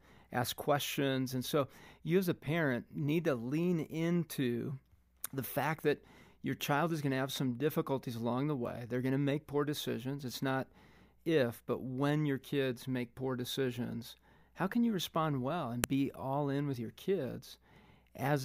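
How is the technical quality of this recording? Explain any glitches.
One glitch stands out in this speech. At 15.84 s, between "can you respond well" and "be all in with", there is a sharp, loud click. This is a file header played as audio. A second WAV piece was joined without its header stripped. Those few dozen bytes play as raw samples, producing a brief snap unrelated to the signal.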